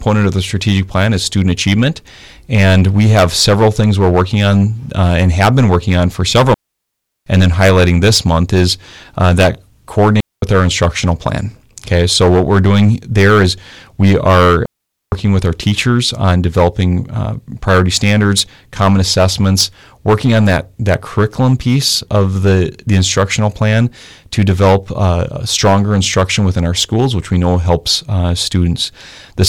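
Hard clipping runs through the whole speech clip. The signal is driven about 14 dB past what the chain can pass, so roughly one sample in twenty has its peak sliced flat. The squared-off tops add high harmonics, heard as a harsh fuzz on every louder syllable.

Digital wireless dropouts occur three times. From 6.54 to 7.27 s, right after "working on for several", the receiver mutes for 0.73 s. From 10.20 to 10.42 s it mutes for 0.22 s, ending just before "our instructional plan". From 14.66 to 15.12 s it mutes for 0.46 s, between "doing there is we" and "with our teachers on". Each time the link lost too much data and the receiver faded out almost instantly, leaving a clean gap of near silence with no noise burst on either side.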